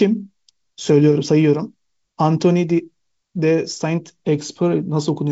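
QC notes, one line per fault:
No faults heard; the speech carries the light upper-band hiss and the empty spectrum above about 7.7 kHz expected of G.722 wideband telephone coding at a rate consistent with 56 kbit/s.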